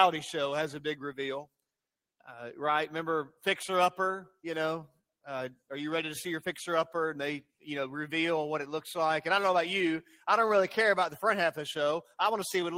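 The sender's clock seems to be running about 3% slow against the receiver's, so there's clock drift between sender and receiver the whole way through. The receiver's jitter buffer keeps draining because material arrives a bit late, and it never settles. Rather than a constant pitch or speed shift, that mismatch shows up as small, irregular timing hiccups scattered across the audio, which is the classic signature of two clocks that simply don't agree.

From 0.50 s to 12.62 s you can hear the repeated timing corrections that result. The receiver keeps stretching things by repeating short slices to cover the shortfall. The edits all go the same way, padding rather than cutting, and they're spaced unevenly. Net effect: the sound plays at roughly 97% of its real pace and picks up something like 400 ms overall. Listen for a slightly unsteady tempo with tiny stutters rather than anything dramatic.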